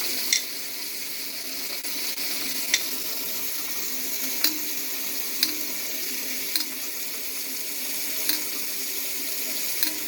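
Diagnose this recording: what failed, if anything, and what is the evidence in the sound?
Network delivery and jitter buffer: repeated stalls (stutter) between 1.31 and 3.16 s. Eleven brief hitches, the longest 29 ms, add up to 152 ms of continued sound. Packets arrived late, the buffer ran dry each time, and the receiver extended the last sound until data resumed. Nothing is lost.

Jitter buffer slow-down from 3.25 to 4.43 s: the sound plays at 94% speed with unchanged pitch, stretched by 77 ms. With the buffer low after the stalls, the receiver repeated short pitch-period segments to rebuild its reserve, drawing the sound out.

Jitter buffer speed-up from 6.48 to 6.91 s: the sound runs at 110% speed at the same pitch, with around 50 ms cut. Once excess audio had piled up in the buffer, the receiver removed short periodic pieces to lower latency, so the passage sounds hurried.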